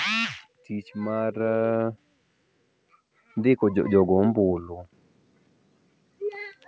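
From 0.68 to 2.01 s the automatic gain rises: the gain control decides the input is too quiet and lifts it by about 6 dB, so the voice and the background swell together. A second automatic gain rise, about 4 dB, follows from 3.21 to 4.2 s. On the waveform the envelope widens steadily across both spans, and the spectrogram brightens evenly at all frequencies up to its 8 kHz ceiling, which fits a wideband call codec.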